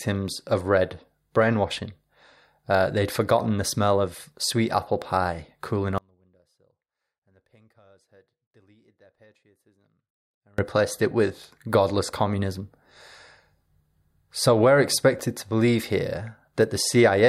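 From 5.98 to 10.58 s the speech undergoes an audio dropout to a faint residue: a 4.6 s abrupt cut leaving only a faint leak about 35 dB down, likely a lost signal feed with the path still live. At 15.18 s there are chunks out of order: a 5.33 ms chunk plays late, after its successors, giving a brief jumbled moment with three hard joins.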